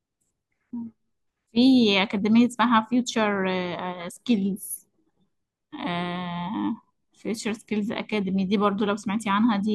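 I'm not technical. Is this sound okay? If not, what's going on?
Yes, this sound is okay, and nothing is going wrong with it.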